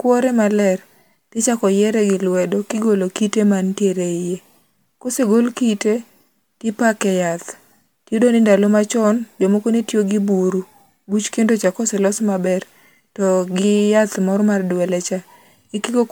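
Generation loss runs through the whole speech clip. It sounds swirly, smeared and hollow, and consonant attacks blur. The likely cause is repeated MP3 re-encoding, around seven passes, each adding fresh quantisation noise. It fits a 128 kbit/s chain, with nothing above 20.1 kHz.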